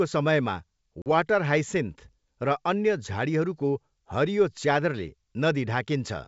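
Packet loss on an ADPCM call hits this speech clip at 1.02 to 1.08 s, where about 40 ms of audio, a couple of packets' worth, drops out into hard-edged silence. Because ADPCM codes each sample as a correction to a prediction, the gap leaves the receiver's predictor and step size out of step with the sender's. The sound comes back with brief distortion until the decoder re-converges, over the wideband G.722 path.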